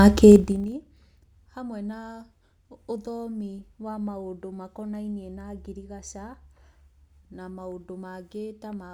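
Between 0.32 and 0.76 s the speech drops by roughly 25 dB with zipper noise riding on the fade: the gain moves in unsmoothed 2 dB jumps, about thirty a second, and each jump leaves a tiny click, so the fade ticks like a zip being drawn. On the waveform the envelope descends as a staircase rather than a ramp; a spectrogram shows faint vertical broadband lines at every step.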